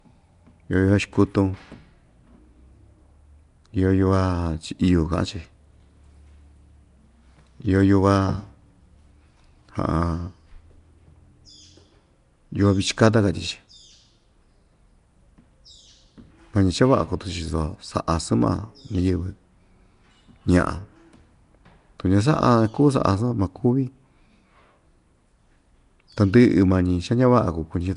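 From start to finish the speech sounds rough and smeared, with a hissy halo, an underwater quality, and nothing above 10.6 kHz. That's likely Nellymoser compression at around 44 kbps: short blocks coded on a tight, fixed bit budget, with starved weak bands refilled by noise.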